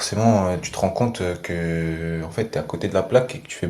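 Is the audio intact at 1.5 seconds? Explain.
Yes, at 1.5 seconds the speech plays through intact, with no dropout, click, distortion or other technical fault at that moment.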